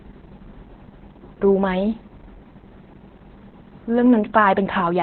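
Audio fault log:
Throughout, Opus voice compression: the codec was starved of bits and fell back to narrowband linear-prediction coding, which fits a SILK-only mode at roughly 8 kbps in 20 ms frames. Almost nothing survives above about 4.3 kHz, so the speech sounds muffled and phone-like. The excitation is coded very coarsely, which makes the voicing hoarse and slightly robotic. The codec damage is heavy and steady across the whole clip.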